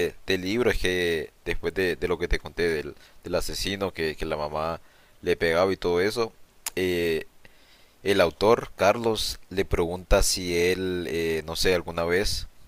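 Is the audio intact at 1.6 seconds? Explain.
Yes, at 1.6 seconds the speech plays through cleanly, with no dropout, click, distortion or other fault to be heard.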